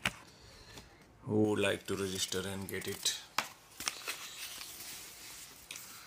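From 1.45 s to the end the audio has pre-emphasis left on: the treble was boosted for recording or transmission and never cut back. Around 10 kHz it sits about 11 dB above 1 kHz, a shape that fits the J.17 curve, so the sound is thin, bright and sibilant.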